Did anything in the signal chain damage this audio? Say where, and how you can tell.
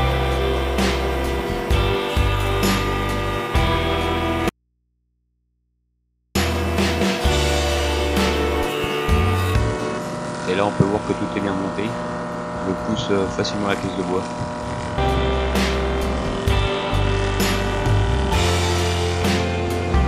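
Yes. There is an audio dropout to a faint residue from 4.49 to 6.35 s, about 1.86 s long. The sound cuts out abruptly. It is not a fade or a pause. During the gap only mains hum remains, roughly 50 dB below the normal level. The path after the break stayed live, so the hum is the open input picking up interference. The likely cause is in the analogue wiring, such as a connection briefly breaking before the converter.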